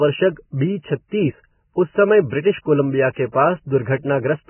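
From start to finish the speech is band-limited and grainy, with nothing above 3 kHz. What remains of the treble is rough and hissy, and consonant onsets are blurred. The damage is heavy, most likely from Vorbis compression at a very low bitrate, on the order of 10 kbps. On a spectrogram the energy stops at a hard ceiling near 3 kHz. Below it, the upper bands look patchy and speckled where coarsely quantised detail has been replaced by noise-like fill.

At 3.13 to 3.16 s, and again at 3.32 to 3.35 s, a sharp attack is preceded by a short smear of hiss. This is pre-echo, about 35 ms long in the first case and 25 ms in the second. The codec spread quantisation noise sized for the loud onset across its whole block, so the quiet moment before the attack fills with noise and the onset itself sounds softened. On the waveform, a low fuzzy envelope swells just ahead of each transient. On the spectrogram it appears as a broadband smudge that reaches backwards in time from the attack.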